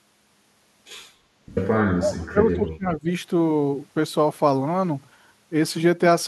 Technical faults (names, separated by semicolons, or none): speech suppressed in double talk